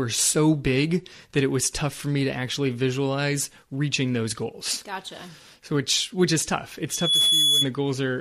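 A speech recording that ends in a loudspeaker feedback squeal from 6.90 to 7.69 s. A single 3.4 kHz tone swells over roughly a third of a second until it sits somewhat louder than the speech. The microphone is picking up the loudspeaker it feeds, and at that frequency the loop gain exceeds one. On a spectrogram this shows as a thin horizontal line at 3.4 kHz that brightens quickly. The waveform envelope swells into a dense, steady band.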